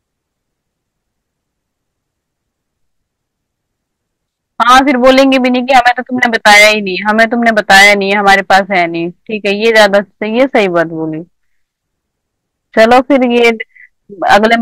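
Hard clipping flattens the speech peaks from 4.60 to 6.73 s, 7.08 to 8.82 s, 10.40 to 10.82 s, 12.77 to 13.50 s and 14.27 to 14.55 s. The overload is about 5 to 11 dB, which cuts the tops square and turns loud syllables into harsh fuzz.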